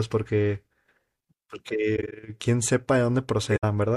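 Corrupt frames were concealed twice: the decoder caught damaged AAC data and covered it itself. At 1.96 to 2.13 s and 3.51 to 3.64 s, the speech is covered over 7 and then 5 damaged frames.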